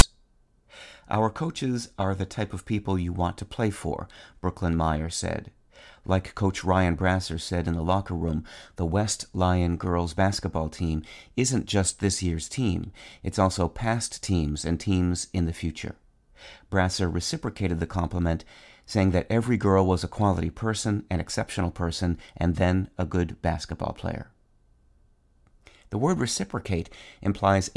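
At 0.00 s, file tags played as audio: text tag bytes decoded as samples give a loud, one-sided snap before the speech begins, not an edit click.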